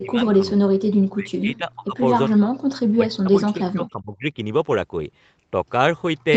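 From 0.0 to 0.6 s, the speech dips by roughly 25 dB. It dips again from 0.93 to 1.97 s, more deeply, by around 40 dB. A third drop follows from 2.96 to 4.25 s, by roughly 30 dB. This is likely speech suppressed in double talk. Both ends spoke together, and the echo canceller mistook the near talker for loudspeaker echo and pulled the level down. The audio is band-limited to 8 kHz by normal call processing.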